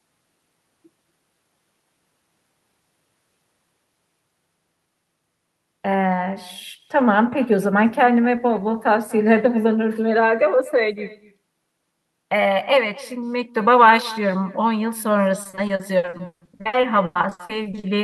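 Throughout, echo with no canceller shadows the speech about a fifth of a second later, about 20 dB down; the spectrogram shows a faint, delayed duplicate of the talker's syllables. From 15.43 to 17.85 s, repeated packet loss gives robotic, choppy sound: about two dozen patched holes, up to 160 ms, covering 40% of the span, appear as smeared, repeated blocks in the waveform.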